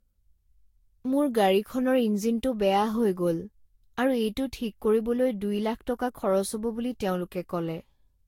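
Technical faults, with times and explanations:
Throughout: generation loss. The speech has a swirly, smeared, hollow quality, with consonant attacks blurred and a watery texture that seems worse than a single pass at a bitrate around 60 kbit/s would give. This likely comes from about five rounds of lossy encoding, plausibly Vorbis, each quantising on a shifted frame grid so errors pile up. A spectrogram shows nothing above 16.6 kHz, flickering holes between harmonics, and onsets smeared in the waveform.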